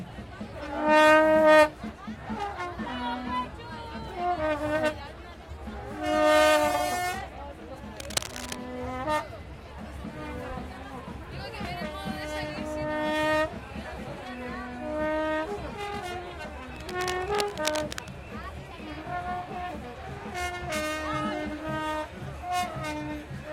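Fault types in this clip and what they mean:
Cable scratch noise: Two brief patches of dense, ragged scratching and rustling ride over the sound, first from 7.97 to 8.57 s, nearly as loud as the sound itself, then from 16.76 to 18.09 s, somewhat quieter and lasting longer. The uneven, crackly texture likely comes from a worn cable, connector or control being moved, its contact resistance jumping rapidly and injecting bursts of noise into the signal.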